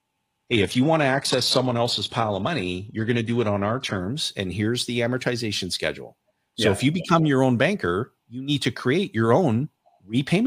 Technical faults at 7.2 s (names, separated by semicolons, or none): none